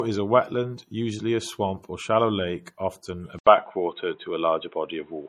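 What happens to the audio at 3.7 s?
By 3.7 s the sound has turned dull and boxy. Everything above 3.8 kHz is gone, a faint new noise floor sits well beneath the speech (around 50 dB down), and the level shifts by around 5 dB. The change begins at 3.39 s, right after "shallow lake often a", with a short 80 ms silence, and lasts to the end at 5.29 s. This is an input switched to a poorer device, likely a second microphone or a headset's call profile, whose narrow band, tone and noise take over.

Underneath this, at 3.7 s as everywhere in the clip, the audio carries the smeared, swirly artefacts of heavy MP3 compression, with nothing above 18.8 kHz. A high-rate file still sounding like this points to low-bitrate audio saved at a high bitrate, likely an MP3 of around 48 kbit/s re-encoded at 320 kbit/s. The second pass keeps the damage from the first encoding and cannot restore the detail that encoding discarded.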